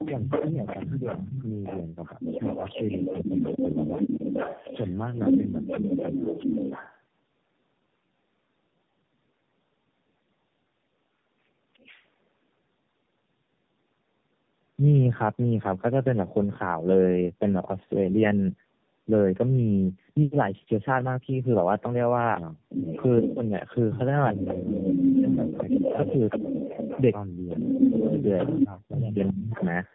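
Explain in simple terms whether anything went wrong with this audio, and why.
Tandem speech coding runs through the whole clip. The call crossed three phone-network speech coders in a row, and each one squeezed the sound again after the previous one had already roughened it. The damage piles up, so the voice sounds rough, muffled and warbly, with nothing above about 3.5 kHz. That is more than any single phone link would cause.

Speech suppressed in double talk happens twice, from 24.31 to 26.09 s and from 27.52 to 29.59 s. In the first stretch the voice turns much quieter in patches adding up to about one second. In the second it drops almost to nothing in patches adding up to about one and a half seconds. The likely cause is that both people spoke at once and the echo canceller, unable to tell them apart, turned everything down.

An echo leak runs from 24.38 to 29.91 s. A second copy of the voice arrives about 0.39 seconds late, only a little quieter than the original, so the speech seems to trail a ghostly repeat of itself. 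This points to someone using a loudspeaker whose echo canceller failed to remove all of the sound its microphone picked up, so part of it was sent back.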